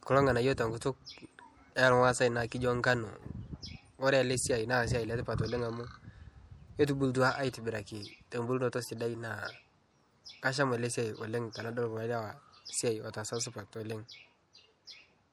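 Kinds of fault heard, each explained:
MP3 compression: Throughout the speech there is plainly audible coding damage, a watery, swirling quality, likely from MP3 encoding at a rate that fits about 64 kbps. The encoder dropped weak frequency components to save bits, and those components switch on and off from frame to frame. On a spectrogram this appears as speckled, patchy gaps in the quieter regions, with content reaching up to about 21.1 kHz and nothing above it.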